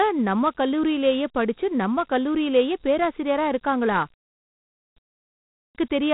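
Dialogic VOX ADPCM runs through this speech clip: coarse 4-bit coding leaves a gritty hiss trailing the voice, nothing is heard above about 3.9 kHz, and the 32 kbps rate fits 8,000 samples a second. A clipped start after a pause occurs at 4.55 s, just after "நம்ம கல்லூரிலேயே பேராசிரியரா இருக்காங்களா", and again at 5.35 s. After silences of 0.48 s and 0.44 s the output device seems to fall asleep, and it swallows roughly 0.41 s and 0.40 s of onset while it wakes.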